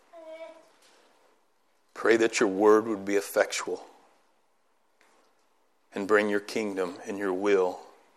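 No technical faults are audible anywhere in this recording.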